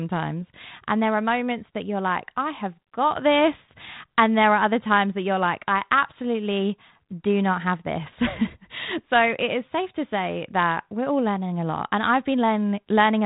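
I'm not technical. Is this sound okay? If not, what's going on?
Yes, nothing here sounds wrong.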